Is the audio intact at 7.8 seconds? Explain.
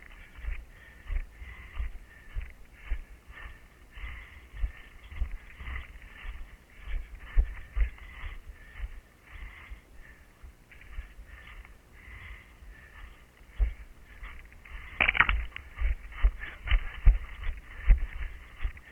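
No. Video or display buzz runs through the whole clip, so it is present at 7.8 seconds too. A screen or video cable is coupling into the audio path. It sounds like a 60 Hz buzz with hash above it, sitting roughly 30 dB below the signal.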